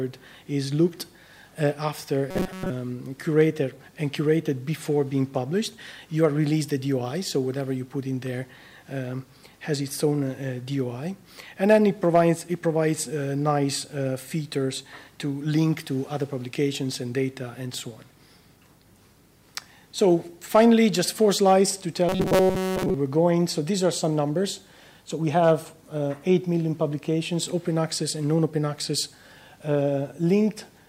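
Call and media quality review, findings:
Robotic sound from repeated short buffers, 2.31–2.71 s and 22.09–22.94 s: rigid metallic buzz locked at 188 Hz. Likely playout starvation, with most of the audio replaced by loops of roughly 5.3 ms. Unlike dropouts, there is no silence, and the rough contour survives.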